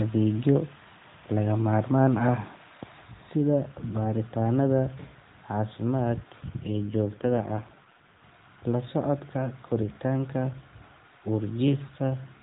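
From 6.68 to 8.27 s an AMR rate drop occurs. The mobile link forces the narrowband codec to a lower rate, consistent with 12.2 falling to 5.9 kbps. The band stays below 4 kHz with no gap, but the speech turns buzzy and synthetic until the rate recovers.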